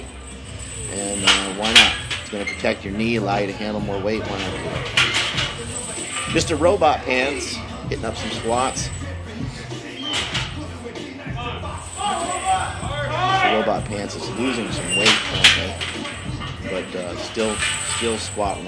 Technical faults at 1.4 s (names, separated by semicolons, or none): none